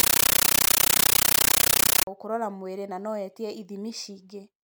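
From the start to about 2.07 s, the speech is replaced by a compressed stream played as audio. The receiving end took an encoded Dolby Digital stream, consistent with AC-3, as plain samples instead of decoding it. The result is loud, harsh, chattering static. It pulses 31.25 times a second. Each pulse is a burst of noise about 13.3 ms long, followed by silent padding. Normal speech takes over at "gũkũrora mwĩrĩ na no".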